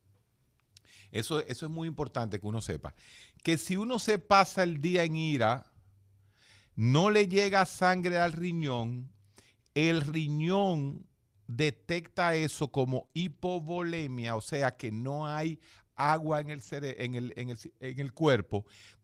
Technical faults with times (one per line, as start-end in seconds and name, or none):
1.67-1.73 lost packet rebuilt from error correction
3.91-4.25 lost packet rebuilt from error correction
4.27-4.31 short concealed packet loss
8.61-8.83 lost packet rebuilt from error correction
12.91-13.33 lost packet rebuilt from error correction
13.07-13.15 short concealed packet loss
13.77 lost packet rebuilt from error correction
16.39-16.73 lost packet rebuilt from error correction